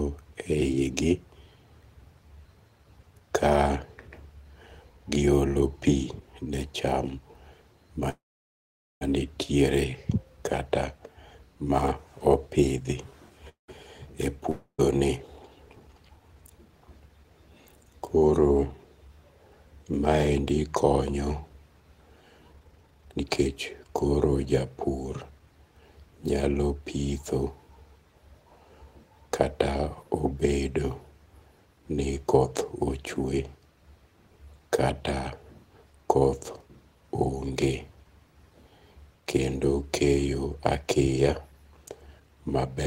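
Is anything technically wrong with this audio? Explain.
Yes, there are three kinds of network trouble in this speech.

There are two call audio freezes, at 8.09 to 9.03 s and 13.49 to 13.70 s. The last bit of speech smears into a fading buzz, then goes quiet for about 0.82 s in the first and 0.14 s in the second. After that, speech picks up exactly where it left off with nothing skipped. That's likely delayed packets draining the jitter buffer, so the gaps (0.92 s and 0.19 s) simply get inserted into the timeline.

Then there's a long network dropout at 14.50 to 14.80 s. Same fading-buzz tail, then roughly 0.1 s of silence, but this time speech resumes further along. About 0.28 s of audio likely never arrived and is simply gone, so you hear a jump rather than a pause.

Finally, there are two jitter buffer speed-ups. From 16.28 to 17.31 s speech runs at about 114% speed, and from 22.53 to 24.91 s at about 138%. 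Pitch stays put, but it sounds rushed, the second one clearly so. The receiver is trimming tiny pitch-period slices over and over to shed backlog, roughly 0.15 s in the first stretch and about a second in the second.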